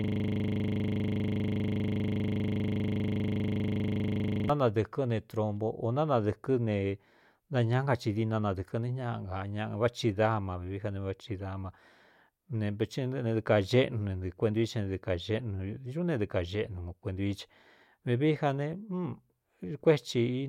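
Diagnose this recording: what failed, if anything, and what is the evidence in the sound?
The failure sits at the driver/buffer stage: a system hang loop. The clip opens already mid-fault, and from 0 to 4.5 s the same 40 ms slice of speech repeats over a hundred times. At a 25 Hz repeat rate, that lands as a gritty, low buzz rather than a distinct stutter. The host or driver stopped feeding new audio, while the output hardware kept replaying one small ring buffer, about 40 ms long, until things recovered.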